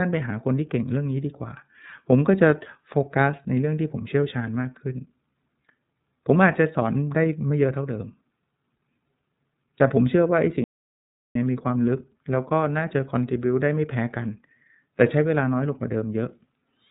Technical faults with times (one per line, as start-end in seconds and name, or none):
0.00-16.91 iLBC codec
10.64-11.35 audio dropout to silence